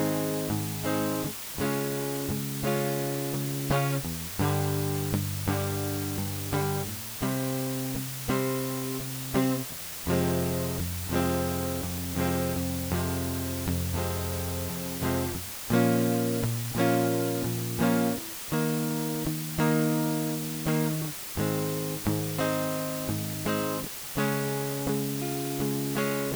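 From start to finish the music is reduced to 5 bits with dither, a low bit depth with dither: random noise added before coarse rounding turns the error into a steady, even hiss only about 10 dB below the music, without distortion. A spectrogram shows a flat noise floor across all frequencies.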